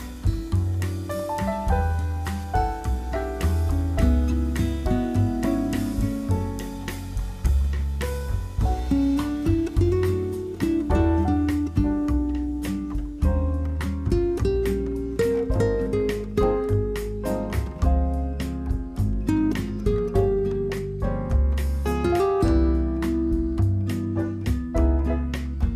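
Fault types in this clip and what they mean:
DAB burbling: weak reception lets bit errors slip past error correction and corrupt the MP2 samples and scale factors, so single sub-bands briefly jump in level. Here it is a short light patch of watery blips at 21.33 s, consistent with a very low error rate damaging a couple of frames.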